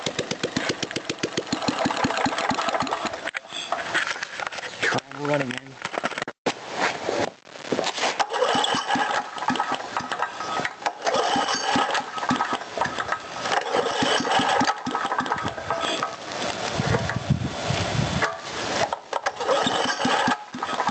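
All the way through there's gain pumping: the gain swings by about 20 dB around loud moments, likely from gain set far too high with a fast limiter clamping down.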